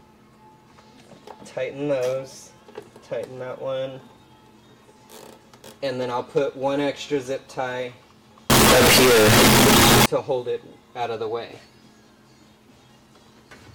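From 8.50 to 10.06 s the audio turns into a very loud, harsh, nearly square waveform at an almost fixed, high level, with background noise as loud as the main sound. This is float read as integer, likely 32-bit float samples read as 32-bit integers.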